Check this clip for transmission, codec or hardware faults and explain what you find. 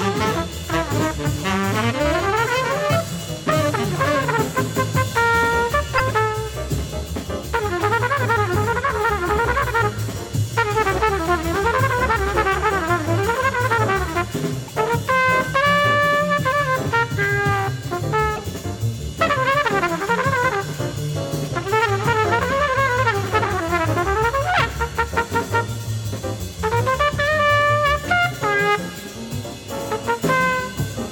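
Two kinds of fault are audible: three brief decoding glitches in the first two-thirds of the clip, and a run of regular clicks near the end.

Broken MP3 bit reservoir, at 5.97–6.00 s, 14.67–14.70 s and 18.35–18.38 s. Each glitch lasts about 30 ms, roughly one 26.1 ms MP3 frame. The likely cause is missing frames. A following frame then reaches back into the reservoir for bits it had stored earlier and decodes the wrong bytes instead. The sound skips forward, with a short garbled burst or gap where the bad frame plays.

Periodic USB or driver dropouts, from 25.17 s to 29.14 s. About three losses occur, spaced 2.0 s apart. Each time, something stalls the bus or driver at a fixed interval, and roughly a millisecond of audio goes missing and is replaced by silence. Each loss sounds like an evenly timed tick that is heard only where the signal is present.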